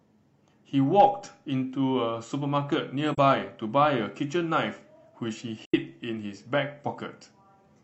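A speech recording with two short, soft-edged gaps where the sound fades out and back in: one at 3.13 s lasting about 43 ms, and a longer one at 5.65 s lasting about 85 ms. Both are AAC frame loss with muting. The decoder replaced missing frames with silence, and the overlapping transform windows smeared the edges into brief fades. The gap lengths fit one lost frame and then two consecutive lost frames.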